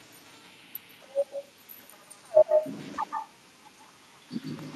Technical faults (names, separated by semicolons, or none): echo with no canceller